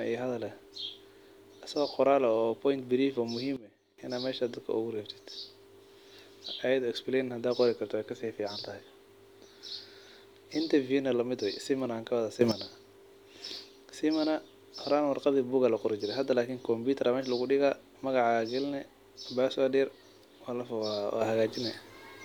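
Sudden gain jumps occur three times in this speech. From 3.56 to 3.98 s the level drops by about 16 dB, from 12.41 to 12.52 s it rises by about 12 dB, and from 21.21 s to the end it rises by about 6 dB. In each case the speech and the background noise step up or down together, instantly rather than smoothly. The likely cause is a digital gain change applied between adjacent samples without any ramp.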